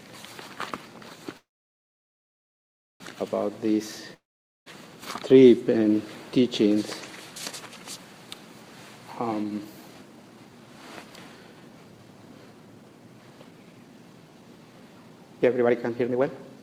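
At 1.37 s packets were likely held up in transit, starving the jitter buffer and causing a call audio freeze. The last sound carries on briefly as a fading buzz, then silence fills most of the gap until 3.02 s. The audio resumes exactly where it stopped, about 1.6 s late, with nothing lost.

From 4.14 to 4.68 s there is a long network dropout, where incoming audio likely stopped altogether. A short fading tail of the preceding sound gives way to silence, and when the audio returns about half a second of it is simply gone.

From 9.28 s to the end, the jitter buffer holds more audio than its target, so the receiver repeatedly trims pitch-period-sized slices in a jitter buffer speed-up. The sound runs at 115% speed with unchanged pitch and feels hurried, losing about a second overall.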